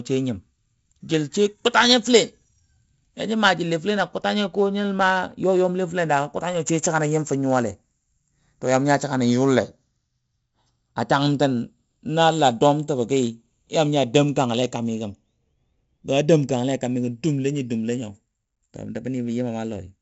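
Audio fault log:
throughout, channels drifting apart: the channels run on slightly mismatched clocks, roughly 30 ppm, so their delay creeps to about half a millisecond, sweeping comb notches as slow flanging.
throughout, 4-bit ADPCM compression: each sample coded as a coarse adaptive step, at a rate that fits 64 kbps, leaving gritty level-following hiss, smeared attacks and nothing above 7.7 kHz.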